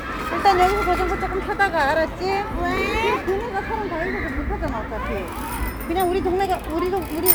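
A repeated buffer at 4.68 s: new audio arrived late, so one tiny slice, which fits a 64-sample buffer, played three times, heard as a click or brief buzz.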